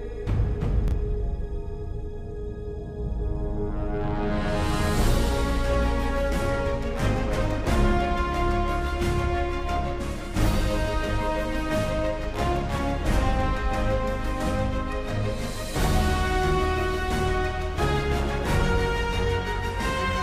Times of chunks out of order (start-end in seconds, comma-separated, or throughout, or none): 0.88-0.92